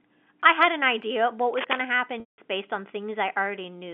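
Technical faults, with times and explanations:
1.54 to 1.82 s, cable scratch noise: dense, uneven rustling bursts nearly as loud as the speech, likely from a worn connector or cable shifting its contact resistance.
2.20 to 2.38 s, packet loss with pitch repetition: 180 ms missing, fitting a run of 20 ms packets. The last pitch period buzzes briefly, fades to silence, then speech cross-fades back.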